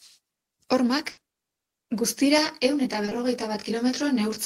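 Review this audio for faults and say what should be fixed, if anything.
A burst of packet loss hit at 1.11 to 1.19 s. Several packets in a row failed to arrive in time, so the receiver extended the last received sound for about 60 ms, fading it as the hole went on, while about 60 ms of real speech was never played. The result is a held, decaying buzz or hiss, followed by speech that resumes further along than it should. Deeper jitter buffering and packet redundancy or forward error correction on the link would prevent it.

Short concealed packet loss follows directly at 1.19 to 1.23 s and occurs again at 3.05 to 3.09 s and 3.09 to 3.13 s. In each case about 20 ms of audio missed the decoder deadline and was patched by continuing the preceding sound, then crossfading back into the real signal. The two at 3.05 and 3.09 s run back to back, giving roughly 40 ms of smeared, slightly wobbly sound where a short consonant can disappear. 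Stabilising network jitter and enabling in-band FEC would prevent it.

Channel delay (comb filtering) runs from 2.38 s to the end. One channel arrives about 20 ms behind the other, and when the two are summed to mono, the shared content cancels at evenly spaced frequencies, with the first notch down around 30 Hz. The speech from that point takes on a rough, slightly doubled quality, with a fixed comb of dips across the spectrum. Aligning the channels before the mono downmix, or using only one of them, would prevent it.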